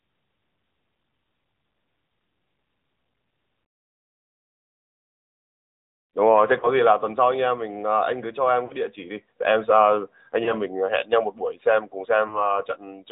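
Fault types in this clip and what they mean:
AMR narrowband mobile codec: mobile speech coding that removes everything above 4 kHz, leaving the voice plainly buzzy and synthetic throughout, which fits a 10.2 kbps mode.
lost AMR speech frames: the decoder covers failed frames by repeating earlier settings at falling gain, giving four short dips or warbles, the longest near 12.28 s.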